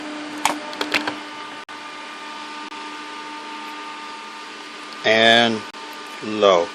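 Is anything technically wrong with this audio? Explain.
Yes. Gaps between stream segments occur at 1.64–1.69 s, 2.69–2.71 s and 5.71–5.74 s, lasting 49, 25 and 31 ms. The timestamps of adjacent one-second segments leave small holes that the player fills with silence. The sound cuts out abruptly and resumes with nothing lost. On a waveform these appear as flat stretches with hard edges, and on a spectrogram as narrow blank vertical strips.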